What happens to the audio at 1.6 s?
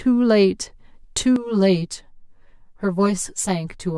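At 1.6 s the speech is inside a stretch of channel delay (comb filtering) that runs from 1.36 s to the end. One channel lags the other by around 10 ms before the mono sum, so the sound turns hollow and phasey. A spectrogram shows fixed dark horizontal notches from around 50 Hz, repeating roughly every 100 Hz.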